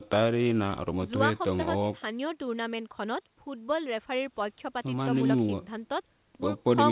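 No technical fault can be heard in the speech, which has the narrow telephone band of a call path, with nothing above 4 kHz as expected from G.711 mu-law coding.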